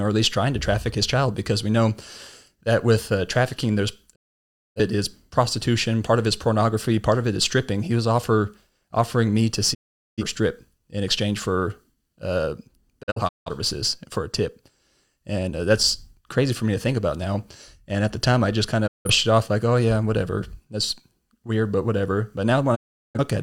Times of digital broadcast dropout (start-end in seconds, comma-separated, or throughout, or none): 4.14-4.80, 9.73-10.23, 13.01-13.51, 18.86-19.10, 22.74-23.20